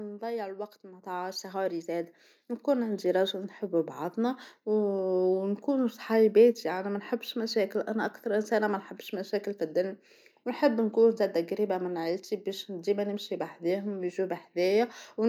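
At 1.02 s the microphone volume stepped up: the call software raised the input gain by about 6 dB in one step, so voice and background jump louder together.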